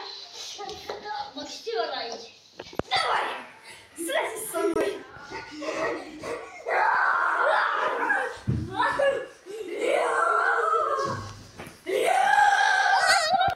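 At 4.74 to 4.76 s the sound cuts out for about 20 ms, a short Bluetooth dropout, likely from a single packet reaching the headphones too late. Playback resumes further on, as if the audio kept running. Waveform and spectrogram both show a brief blank gap.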